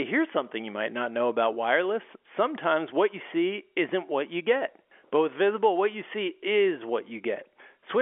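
Nothing's wrong with this bit of speech; it just has the narrow, phone-line sound of G.711 telephone coding, with the band running from 300 Hz to 3.4 kHz, which is simply how an ordinary phone call comes across.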